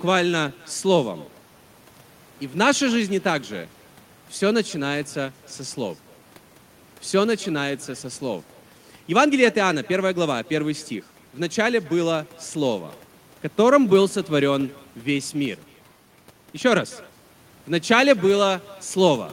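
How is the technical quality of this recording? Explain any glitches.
The recording carries one persistent fault. Echo with no canceller runs throughout: the far end's loudspeaker feeds its microphone, returning the speech roughly a third of a second later at about 25 dB down, heard as a faint, thinner shadow. A spectrogram shows each syllable's pattern repeated as a fainter ghost trailing behind it.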